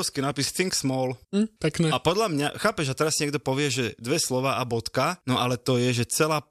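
No technical faults can be heard anywhere in this recording.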